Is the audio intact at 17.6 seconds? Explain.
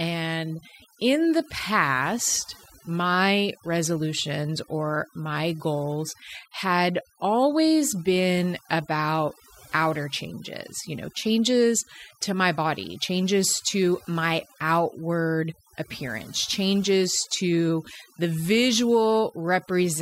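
No. At 17.6 seconds the speech still carries the overdone noise removal that runs through the whole clip. The reduction was set so hard that each frequency band near the estimated noise floor gets pulled down or shut off, and the softer parts of the voice are cut along with the noise. The gaps between phrases drop and break up into twinkling specks. Unlike plain muffling, the high frequencies are not uniformly dulled; isolated tones flicker in and out instead.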